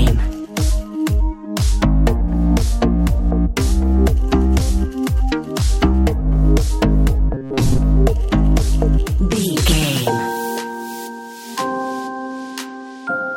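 Around 7.34 to 7.79 s the sound goes robotic, a rigid metallic buzz pitched at 134 Hz. It's likely robotic sound from repeated short buffers: a chunk of about 7.5 ms looped over and over, covering most of that stretch while the real audio got skipped.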